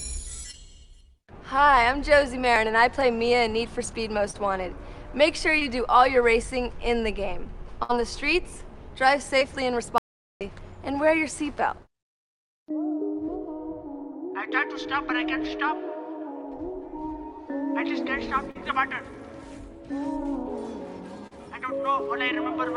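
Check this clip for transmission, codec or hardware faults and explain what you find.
The clip has three kinds of transmission fault: repeated short concealed packet loss, one burst of packet loss, and a dropout to silence.

Short concealed packet loss occurs at 0.51, 4.31, 5.59 and 9.39 s, about 20 ms missing each time, and at 18.51 and 21.27 s, about 40 ms each. Each time, late or lost packets forced the receiver to extend the preceding sound before blending back, heard as a brief smear or wobble.

A burst of packet loss runs from 7.83 to 7.91 s, with 60 ms of audio missing. The receiver carried the last sound forward while fading it, so there is a short held buzz or decaying hiss, then the audio picks up further along with that stretch gone.

An audio dropout to silence lasts from 9.98 to 10.41 s, about 0.43 s. The input was likely lost, for example through a disconnected device, failed link or accidental mute, while silence kept being written. 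The sound cuts out to total silence with no room tone, and whatever happened in that gap is absent.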